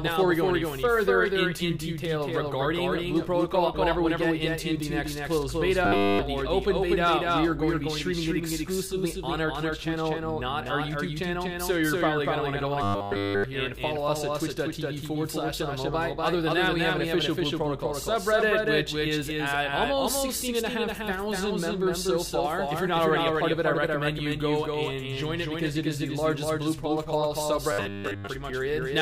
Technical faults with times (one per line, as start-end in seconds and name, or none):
0.00-29.01 doubled audio track
5.85-6.19 robotic sound from repeated short buffers
12.83-13.44 robotic sound from repeated short buffers
27.72-28.27 robotic sound from repeated short buffers